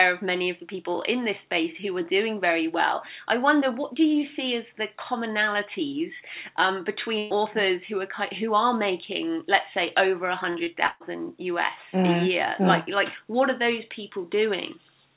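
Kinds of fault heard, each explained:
Burst of packet loss: At 7.18 s and 10.86 s the sound stretches into a held, fading continuation for about 0.12 s and 0.14 s, the second briefly dropping to silence, then jumps ahead, because runs of lost packets were filled in by extending the last sound.
Short concealed packet loss: Brief smears or wobbles at 10.50 s and 10.64 s, lasting about 40 ms and 20 ms. Packets missed the decoder, and the receiver patched each small hole by continuing the previous sound before blending back into the real audio.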